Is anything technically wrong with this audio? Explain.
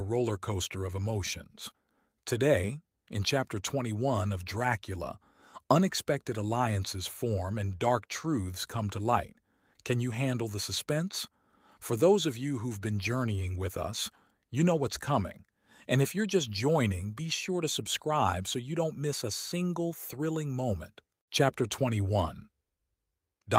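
No, nothing technically wrong.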